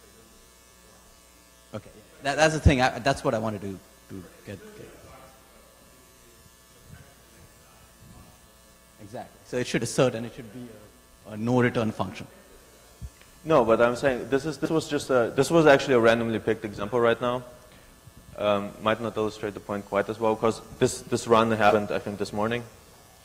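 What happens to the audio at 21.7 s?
At 21.69 to 21.75 s, compressed frames were skipped: a few 20 ms frames were missing from the file or rejected by the decoder as damaged. The audio jumps ahead by roughly 70 ms, leaving an abrupt join where the skipped material should be.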